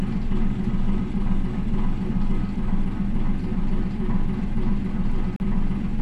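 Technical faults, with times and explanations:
5.36–5.40 s, Bluetooth dropout: the sound cuts to silence for about 37 ms and then resumes further along, as though it had kept playing through the gap. This is likely packets arriving at the headphones too late to use, and the length fits roughly two lost packets. The waveform shows a flat hole, and the spectrogram shows a narrow vertical band empty across every frequency.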